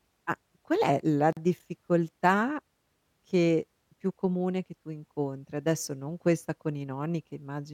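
At 1.33 s, right after "ma qual è la" and before "difficoltà che più comune", there's a gap between stream segments: the two chunks' timestamps don't quite meet, so the player drops in about 42 ms of silence with hard edges before the speech carries on intact.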